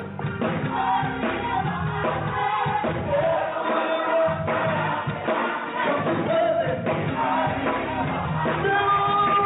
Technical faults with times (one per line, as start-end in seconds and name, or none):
none